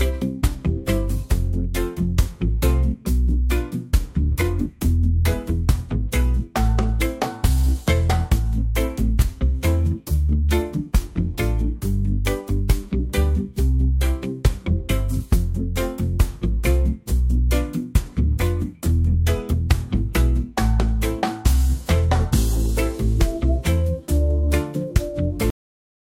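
The final buffers of the recording were never written out, leaving a cut-off end: at 25.50 s the audio halts abruptly in the middle of a sound rather than finishing it. There is no fade or natural decay; the signal falls straight to digital silence, and that dead silence fills the last 0.6 s or so of the clip, so whatever was sounding at that moment is simply truncated.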